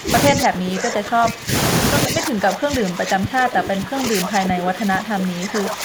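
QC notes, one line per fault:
0.00–0.11 s, 0.32–1.52 s and 2.07 s to the end: speech suppressed in double talk. The speech level drops by roughly 20 dB in stretches, about five seconds in all. This likely comes from an echo canceller that took the near talker for loudspeaker echo and turned it down.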